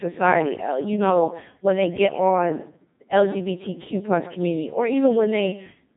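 From start to finish the speech carries heavy Codec 2 vocoder damage, consistent with its 2.4 kbit/s mode. The decoder rebuilds the speech from pitch, voicing and spectral-envelope parameters, discarding the real waveform, so it sounds robotic and buzzy, with nothing above 3.8 kHz.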